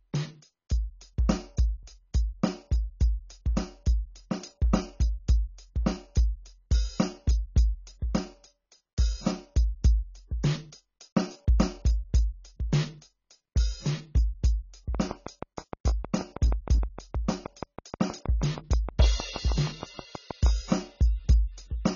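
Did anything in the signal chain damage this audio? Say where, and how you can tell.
Yes. The music is dull and smeared throughout, with nothing above 7 kHz and a warbling, fizzy texture on sustained tones. That points to heavy AAC compression at the codec stage, likely near 16 kbps. A simple low-pass would sound clean rather than swirling.

From 14.95 to 20.47 s a train of clicks rides over the music: some forty same-shaped pulses at a steady 6.3 per second, about 10 dB above the signal. The likely source is interference or a struggling interface. Random crackle would vary in shape and spacing.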